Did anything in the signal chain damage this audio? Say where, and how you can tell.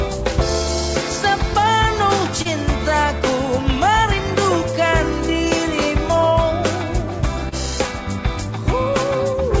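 Yes, at the network stage: short concealed packet loss. Brief smears appear at 2.42 to 2.48 s and 7.49 to 7.55 s, heard over the call path's 8 kHz band limit. About 30 ms went missing each time. The receiver extended the preceding sound, then blended back.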